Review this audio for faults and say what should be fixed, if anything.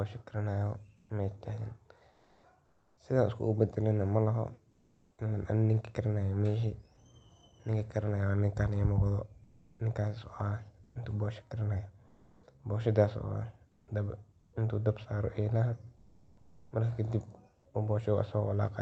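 The sender's voice detector likely put Opus into discontinuous transmission during pauses, so the receiver filled them with synthetic noise. This produced comfort noise in place of the background at 0.97–1.09, 2.11–2.97, 4.71–5.17, 9.43–9.79, 10.83–10.95, 12.07–12.43, 13.71–14.53 and 15.97–16.71 s. The real background gives way to a steady, featureless hiss, with the level shifting by about 7 dB in the first gap and about 1 to 4 dB in others. Disabling DTX on the sending side would keep the genuine background throughout.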